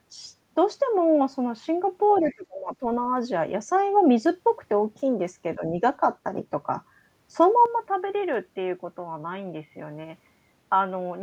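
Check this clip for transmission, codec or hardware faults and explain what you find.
Three kinds of fault are audible: a brief echo leak, two dips from double-talk suppression, and a late change to a poorer input.

The other side's voice leaks through from 2.15 to 2.35 s. A second, distant voice sits faintly behind the talker, about 30 dB down. It is short. The likely cause is an echo canceller that did not fully remove the far end's loudspeaker sound from the microphone.

Speech is suppressed in double talk twice. From 2.2 to 2.83 s the talker's level drops by as much as about 30 dB, over roughly half a second. This overlaps the leaked voice. From 5.55 to 5.79 s a shallower dip of about 10 dB follows. The likely cause is an echo canceller that heard both sides at once and turned the talker down along with the echo.

At 7.66 s the input switches to a poorer device, and it stays that way to the end. 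There is no gap at the switch. The sound turns dull and boxy at once. The level falls by about 5 dB. A new, faint noise floor appears about 45 dB under the speech. This most likely reflects a move to a narrower-band microphone or a headset call profile.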